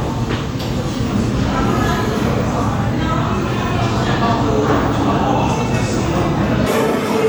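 From 6.66 s to the end at 7.29 s, the audio is read two samples at a time, so it plays at double speed and an octave high. A spectrogram shows everything shifted upward.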